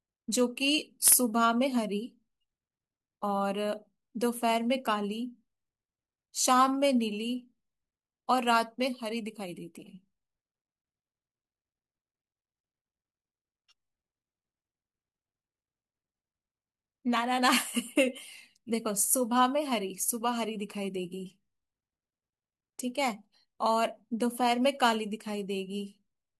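No technical faults can be heard anywhere in the recording.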